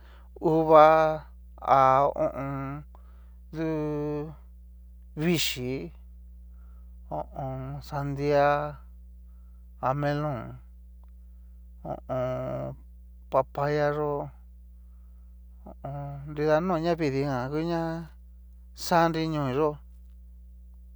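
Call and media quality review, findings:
Mains hum throughout speech: steady 60 Hz tone with low harmonics, roughly 20 dB under signal; ground loop or nearby transformer. Fixed pitch, unlike broadband rumble or fan noise.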